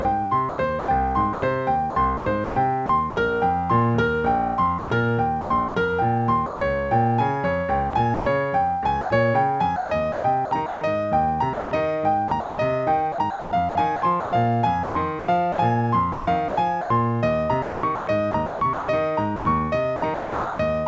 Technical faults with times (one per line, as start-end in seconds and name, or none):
0.02-3.16 sound chopped by the voice detector
4.78-6.61 sound chopped by the voice detector
7.90-20.59 sound chopped by the voice detector